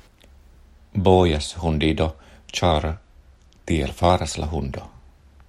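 From 2.71 s to 4.10 s the speech slows by about 5.4 percent and drops roughly 97 cents, close to a semitone, then snaps back to normal rate and pitch. This is a drift correction step, likely from clock-matching software retiming playback in one jump to rebalance its buffer. On a spectrogram the harmonic stack shifts visibly lower across that span with abrupt edges at both ends; the waveform looks slightly stretched there.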